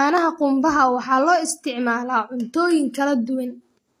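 Speech with HE-AAC compression throughout: s sounds are gritty and metallic, and nothing reaches above 14.9 kHz. The treble is likely copied up from lower bands, which fits a bitrate near 24 kbps.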